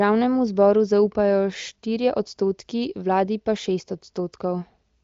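No technical faults are audible.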